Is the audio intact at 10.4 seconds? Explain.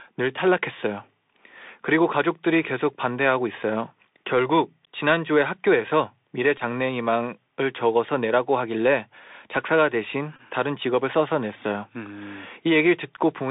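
No. From 10.36 to 10.41 s there is a Bluetooth headset packet repeated fault. About 22.5 ms of audio went missing between headset and phone, which fits six lost voice packets, and the chip decoded the previous packet's bits again for each one. Repeating a 3.75 ms chunk produces a short, steady buzz near 267 Hz until good packets resume. A plain dropout would leave a silent hole instead, and a single repeat would give only a tick. Underneath, the Bluetooth CVSD headset codec is audible at this moment as elsewhere. Its 64 kHz one-bit coding limits the band to roughly 250 Hz to 3.7 kHz and adds a granular hiss, while loud high sounds roughen as they outrun the adapting step size.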